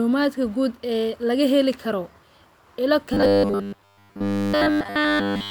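Robotic sound from repeated short buffers, 3.14 to 5.51 s: the speech becomes a rigid metallic buzz at 100 Hz, likely from 10 ms buffers looped throughout.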